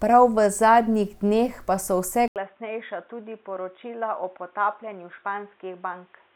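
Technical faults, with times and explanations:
2.28–6.36 s, input switched to a poorer device: after an 80 ms gap, speech turns boxy and quieter, with nothing above 3.8 kHz and faint new background noise, likely from a different microphone.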